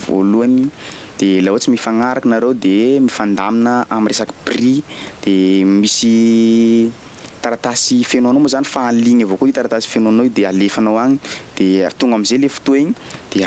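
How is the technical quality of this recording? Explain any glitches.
The level is flattened and squashed throughout, with the gain swinging by around 10 dB. That is gain pumping, likely from input gain set far too high, with a fast limiter pulling it down on every peak. All of this comes through a call path whose sound stops at 8 kHz.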